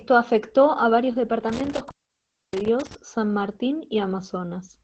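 Throughout the clip the speech carries Opus voice compression. Nothing is present above about 8.5 kHz, and the coarsely coded excitation leaves the speech muffled, hoarse and faintly robotic, which fits the SILK coder running at a low bitrate near 12 kbps.

From 1.49 s to 2.95 s an intermittent contact breaks the signal path. The line is open for a total of about 0.63 s in that span. The speech drops out with crackle at the break edges, and faint hiss remains while the contact is open.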